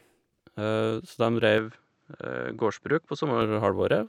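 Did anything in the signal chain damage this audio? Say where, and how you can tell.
Yes. Input switched to a poorer device, 1.58 to 3.42 s, likely at the driver stage. The speech abruptly loses everything above 8 kHz and gains faint background noise about 50 dB down, with no gap or level jump, as another device's narrower band takes over.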